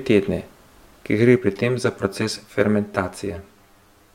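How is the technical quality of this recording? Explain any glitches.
The recording has one fault. From 1.37 s, right after "ker gre", to the end, channel delay causes comb filtering: one channel lags by around 10 ms, so the mono sum cancels at evenly spaced notches starting near 50 Hz, sounding hollow and phasey.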